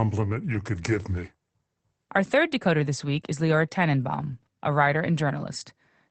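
A brief rough, noisier patch at 0.53 to 0.55 s, just before "could give me", and again at 4.31 s, before "a writer": each is a lost packet rebuilt from error correction, a 20 ms frame replayed from a coarse backup copy.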